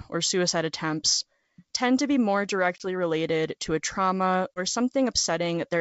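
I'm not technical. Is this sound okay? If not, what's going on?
No. There are two brief dropouts from packet loss on an ADPCM call: one at 2.78 to 2.86 s, between "tend to be more" and "related to a trauma", and one at 4.55 to 4.60 s, just after "related to a trauma". Each time, about one 20 ms packet vanishes into silence. The receiving decoder then briefly loses track of the sender, so the speech returns with a click or a rough edge.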